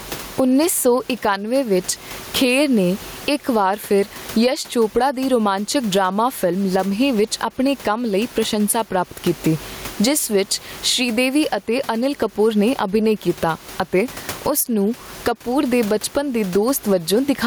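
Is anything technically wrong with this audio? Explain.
Yes. Gain pumping runs throughout the speech: input gain is likely set far too high, so a fast limiter swings the level by around 20 dB, squashing the sound and bringing loud and soft parts closer in level, while the room noise sits about 30 dB below the speech.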